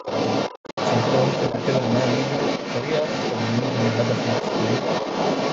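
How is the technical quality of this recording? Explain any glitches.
The recording has clear technical faults: a second voice runs under the talker throughout, the sound drops out once near the start, and the talker dips briefly twice. The call's microphone processing, with nothing above 8 kHz, is not among them.

The other side's voice leaks through for the whole clip, from 0.00 to 5.52 s, at roughly the same level as the talker. The likely cause is the far end playing on a loudspeaker while the echo canceller fails to remove it from the microphone. This differs from crosstalk or a second person in the room because the intruding voice is a playback of a remote talker, not a natural voice in the same space.

A Bluetooth dropout runs from 0.56 to 0.78 s. About 171 ms of sound is lost in scattered holes over 213 ms, and the longest gap is 85 ms. The likely cause is packets arriving too late for the headphones and being discarded, which points to eight packets lost. 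The gaps have hard edges or brief fades and the sound resumes as if it had played on, which separates this from echo-canceller ducking.

Speech is suppressed in double talk at 0.00–0.08 s, where the talker drops by about 15 dB, and at 1.50–1.54 s, a milder dip of about 5 dB. The likely cause is the echo canceller lowering everything because it cannot tell the talker from the leaked far-end voice. These are brief dips in level rather than the true silence of the dropout.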